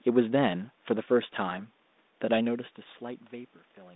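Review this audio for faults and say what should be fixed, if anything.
Nothing here needs fixing; no fault turned up in review.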